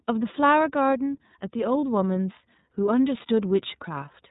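From start to finish the speech is boxed-in and slightly buzzy, with a rough, synthetic edge and nothing above about 3.8 kHz. That is iLBC codec damage: narrowband VoIP coding in independent 30 ms frames, at a rate that fits roughly 13 kbit/s.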